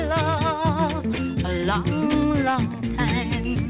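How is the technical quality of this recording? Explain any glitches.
Nothing glitchy shows up at all, just the narrow, phone-like sound of a call line that carries nothing above 4 kHz, which is simply how that kind of connection sounds.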